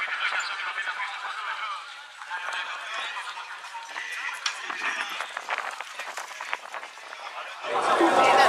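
Nothing in the audio stood out as a technical fault on listening.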